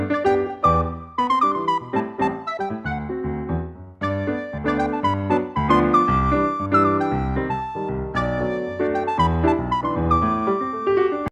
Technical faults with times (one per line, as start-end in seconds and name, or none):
none